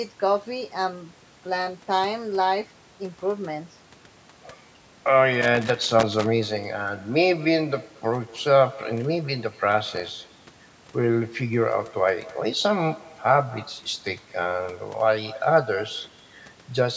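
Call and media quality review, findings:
Echo with no canceller, throughout the speech: a quieter, thinner copy trails each phrase by roughly a fifth of a second, about 22 dB below the direct speech. The far end's loudspeaker is feeding its microphone, and nothing removes that path before the return trip, so the talker hears their own speech come back after the network round trip.

Loose connector crackle, 5.42 to 6.26 s and 9.86 to 10.12 s: irregular bursts of scratchy crackle laid over the speech. Probable component is a worn or dirty plug or jack. The contact making and breaking as it moves chops the signal, and any DC on the line adds pops. The second burst is shorter, at about a quarter of a second. The call microphone processing is band-limited to 8 kHz, and that is normal.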